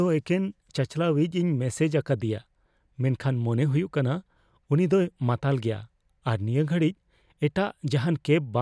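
No technical faults can be heard anywhere in the recording, with the signal staying steady and intact throughout.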